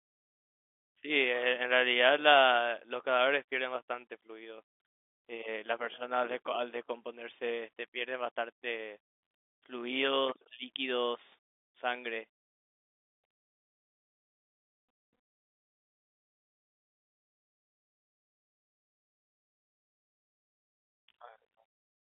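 No technical faults can be heard anywhere in the recording. The speech carries the narrow sound of G.711 telephone coding, with the line band running from roughly 250 Hz to 3.5 kHz and nothing audible above about 3.7 kHz.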